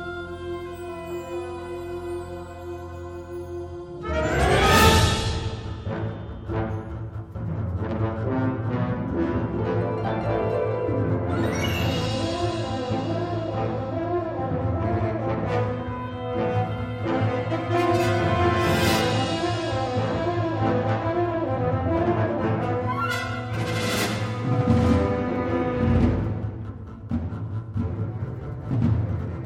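From the start to about 2.0 s there's video or display buzz, a screen or cable leaking a 60 Hz field-rate buzz with hash, sitting faintly well below the sound.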